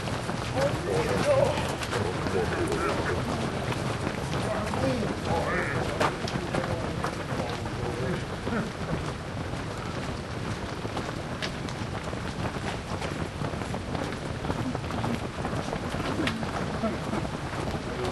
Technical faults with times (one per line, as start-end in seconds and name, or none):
0.00-18.11 wrong sample rate